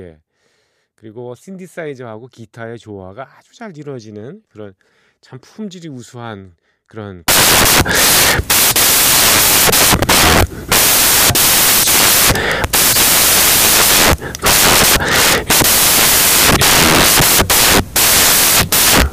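At 7.28 s the reader begins assembling each sample from the wrong bytes and keeps doing so to the end of the clip. Whether it is off by one byte, has the byte order swapped or assumes the wrong alignment, the rapidly varying low-order bits now land in the high-order part of every value. The speech turns into loud, harsh broadband noise, close to white on the louder sounds.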